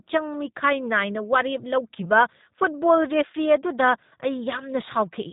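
From start to finish the speech has gone through the G.729 codec, and the damage is plainly audible. Everything above about 3.8 kHz is gone, so it sounds boxed-in and telephone-like. The codec doesn't store the waveform. It rebuilds the speech from a vocal tract filter, a pitch predictor and a few pulses per short frame. That's where the slightly rough, synthetic edge comes from, and it fits a low-rate stream of around 8 kbit/s.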